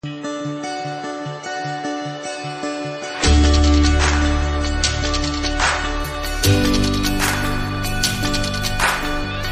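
From the start to 6.0 s the clip plays as an adaptive stream starting at a low bitrate: the player opened on a cheap encoding, which fits an MP3 at around 32 kbit/s, so nothing is present above 8.4 kHz and codec artefacts are stronger. At 6.0 s quality jumps cleanly, consistent with a switch to 128 kbit/s.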